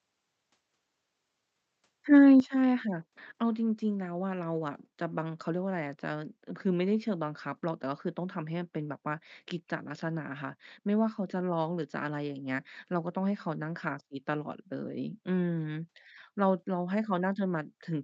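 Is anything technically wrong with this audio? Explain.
Yes. At 2.4 s the speech and the background drop together by about 8 dB in a single step, likely a microphone volume stepped down by the call software's automatic input control, which reduced the device's input gain to tame a level it judged too high. On a waveform the envelope shrinks abruptly at that instant and stays smaller; on a spectrogram every band dims at once. The call path itself is heard as a top end ending near 8 kHz.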